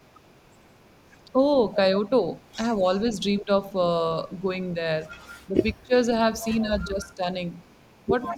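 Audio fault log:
2.45–3.41 s, 5.23–5.86 s, 7.69–8.01 s, echo leak: a faint copy of the speech trails about 173 ms behind, roughly 30 dB down at first and fainter later, likely a far-end canceller letting loudspeaker pickup through.
3.39–3.49 s, 5.49–5.93 s, 6.54–7.24 s, 8.26 s to the end, speech suppressed in double talk: the speech dips by roughly 15 to 25 dB in short gulps, likely the canceller ducking everything while both sides talk.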